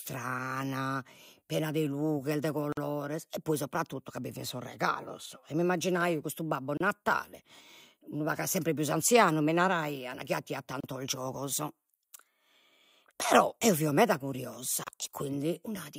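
Gaps at joins of encoded pieces cut the speech at 2.72, 6.77, 10.80 and 14.84 s, every 4 s. Untrimmed encoder padding leaves 48 ms, then 32 ms silences, which show as soft-edged blank columns on a spectrogram.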